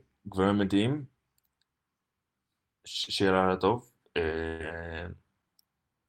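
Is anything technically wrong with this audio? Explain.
Yes, two dropouts in the speech.

At 3.03 s there is a short concealed packet loss: about 40 ms never arrived, and the receiver filled it by extending the preceding sound before blending back. It is heard as a brief smear or wobble. On a spectrogram, the preceding sound runs on unchanged for a few hundredths of a second.

From 4.47 to 4.61 s a burst of packet loss removes about 120 ms. The decoder keeps the last sound going and turns it down, giving a held buzz or fading hiss before the speech resumes further on. The waveform shows a decaying, repetitive stretch.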